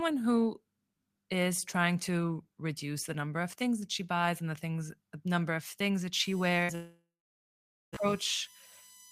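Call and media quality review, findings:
Fixed-pitch whine from 6.13 s to the end at 9.11 s, entering just after "number of things that". USB whine on a 1 kHz frame-rate fundamental, strongest at the 19 kHz harmonic, roughly 25 dB under the speech. USB bus current leaking into the audio through the shared power or ground.

Speech at 6.63 s is briefly held and fades out for about 50 ms, then resumes further on, with roughly 60 ms of speech skipped. Burst of packet loss: consecutive packets lost or late, so the receiver extended and attenuated the last sound before playback continued.

At 6.75 s the last sound is held and decays, then about 0.88 s of silence, with audio returning at 8.01 s and about 1.2 s of speech missing. Likely a long network dropout: nothing arrived, and the receiver's fill faded out before the stream recovered.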